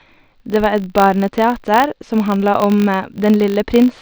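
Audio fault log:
throughout: filter restarted on every block. The filter drops its state at each 20 ms block boundary and starts from silence, so each block opens with a small transient, giving a 50 Hz buzz. Unlike mains hum, it follows the speech level and vanishes in pauses.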